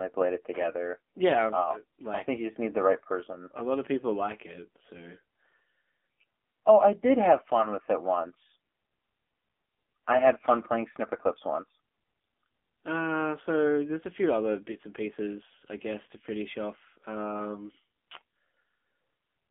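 From start to finish the speech carries AMR narrowband mobile codec damage. It is confined to a 250 Hz to 3.5 kHz band and rebuilt from a coarse vocal-tract model, sounding plainly buzzy and synthetic, which fits a low 7.4 kbps mode. A spectrogram shows a hard ceiling at 3.5 kHz.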